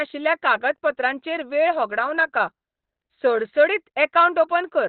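Throughout the clip the speech sounds muffled and hoarse, with nothing above 4.3 kHz and heavy coding damage. This is likely Opus compression at a very low rate, which fits about 12 kbps, with the encoder in its narrowband SILK speech mode.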